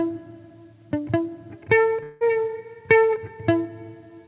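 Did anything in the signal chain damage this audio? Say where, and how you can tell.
Yes. At the network stage, a long network dropout from 2.03 to 2.24 s, likely lost packets, is bridged by a fading buzz or hiss, and about 0.18 s of sound is never recovered.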